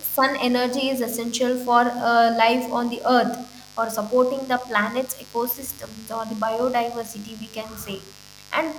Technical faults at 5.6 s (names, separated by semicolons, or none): mains buzz